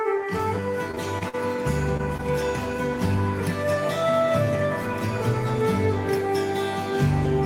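From 0.91 to 1.35 s, repeated packet loss gives the music a robotic, choppy texture. Four holes, the longest about 43 ms, are patched by continuing the last sound.

Short concealed packet loss follows at 1.97 to 2.01 s and 2.17 to 2.21 s. About 20 ms goes missing each time, filled in as a brief smear or wobble.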